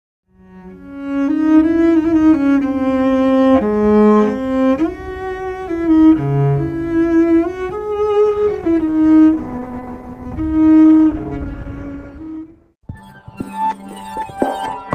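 From 8.12 s to 14.12 s the audio drops to an adaptive stream at a lower bitrate: codec artefacts increase, fitting a switch from about 64 to 16 kbit/s Opus. Unlike a dropout, the quality changes abruptly with no gap.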